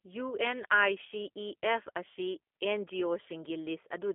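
From start to finish the speech carries G.729 codec damage, plainly audible. The band runs from roughly 250 Hz to 3.4 kHz, with nothing above 3.5 kHz. The coder models each 10 ms frame as a vocal tract filter, a pitch predictor and a few pulses rather than the waveform itself, and the rough, slightly synthetic texture fits the G.729A variant at 8 kbit/s. The result is intelligible but thin and buzzy.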